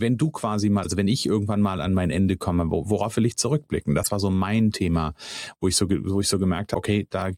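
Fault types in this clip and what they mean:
Damaged data in a compressed stream: part of the encoded speech stream is corrupt, so the decoder misreads the affected frames, loses its place in the bitstream and has to search for the next valid frame header before decoding normally again. In this clip the result is a short chirp, squawk, click or hole replacing the speech twice, from 0.81 to 0.86 s and from 4.00 to 4.08 s, each under a tenth of a second.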